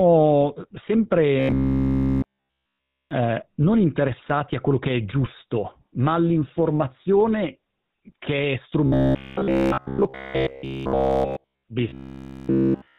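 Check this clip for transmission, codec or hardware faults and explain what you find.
Two faults are audible: a codec coloration across the whole recording and three stretches where the speech turns robotic.

Throughout the clip the speech has a buzzy, gravelly roughness and nothing above 4 kHz. This is the GSM full-rate codec, which fits its 13 kbps rate. It models the vocal tract and excites it with sparse, regularly spaced pulses, so the damage is plainly audible.

From 1.40 to 3.11 s (ending before "eh non interessati a"), 8.86 to 11.64 s (after "ma all'informazione che è") and 11.89 to 12.98 s, the speech becomes a rigid metallic buzz at about 66.7 Hz. That is robotic sound from repeated short buffers, likely caused by audio arriving too seldom. A roughly 15 ms segment loops entirely in place of the real signal.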